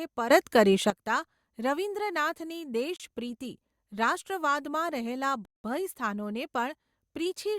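At 0.30 s the level of the speech and its background noise leaps by about 12 dB together and stays raised until 0.90 s. This is a sudden gain jump, likely a digital gain setting applied with no ramp. The waveform shows a step-shaped envelope, and the spectrogram shows a hard vertical edge.

At 2.96 s the speech cuts to silence for 34 ms, and at 5.45 s it cuts out again for 189 ms before resuming. These are Bluetooth stalls, likely from interference delaying packets until the headphone buffer emptied. Each appears as a flat, empty gap in the waveform and a blank vertical band across every frequency in the spectrogram.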